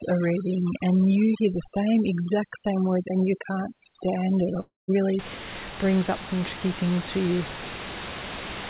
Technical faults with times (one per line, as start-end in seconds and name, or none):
0.00-5.19 overdone noise removal
4.60-4.91 long network dropout